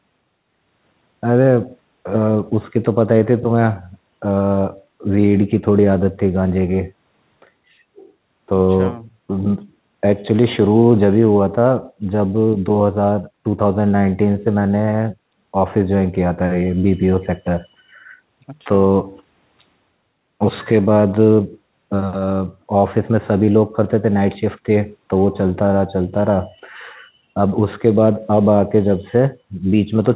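No faults are audible.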